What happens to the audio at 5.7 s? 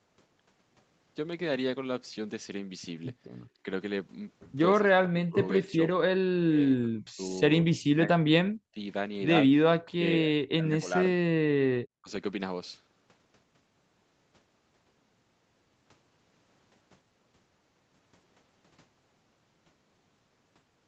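Around 5.7 s the talker's speech is being pulled down by speech suppressed in double talk, likely because an echo canceller could not separate the talker from overlapping loudspeaker echo and attenuated both. From 4.82 to 5.79 s the speech dips and breaks up, about 0.7 s in total, falling by roughly 25 dB at its deepest.

Within that span, from 5.65 to 5.72 s, there is a brief echo leak, likely from a loudspeaker whose echo canceller let part of the returning signal through. It is a faint copy of the speech, delayed by about 197 ms and around 30 dB below it.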